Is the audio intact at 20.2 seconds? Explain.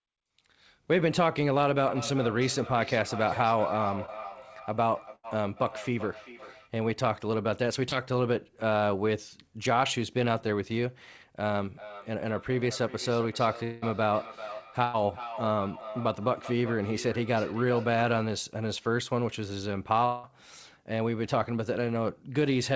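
No. A likely long network dropout cut off the audio from 20.05 to 20.25 s. Its 0.18 s gap is filled with a fading buzz or hiss, and that speech is lost.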